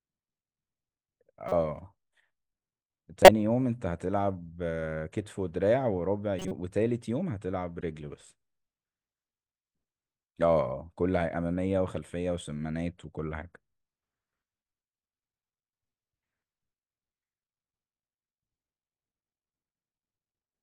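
A speech clip with four bursts of corrupt frame decoded. They fall at 1.49 to 1.56 s, 3.22 to 3.29 s, 6.39 to 6.52 s, and 7.81 to 7.83 s. Damaged bits in the compressed stream were decoded as if valid. Wrong gains and misread codes push energy into the wrong frequencies. Each event sounds like a short chirp or noise blip spanning a few frames. The one near 3.2 s is loudest, with an error peak around -5 dBFS. The last is faint.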